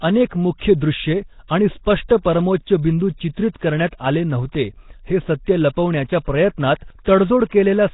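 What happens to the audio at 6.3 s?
Throughout, including 6.3 s, heavy Nellymoser compression likely leaves nothing above 3.8 kHz and refills starved bands with noise, so speech sounds hissy and underwater, not merely dulled.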